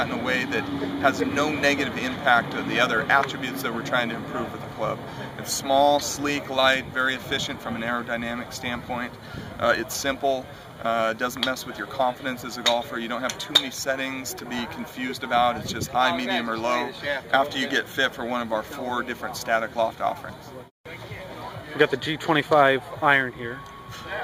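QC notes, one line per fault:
Nothing stood out on listening.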